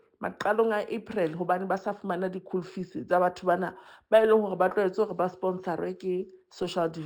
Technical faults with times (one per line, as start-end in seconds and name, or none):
0.00-7.06 imaging from linear upsampling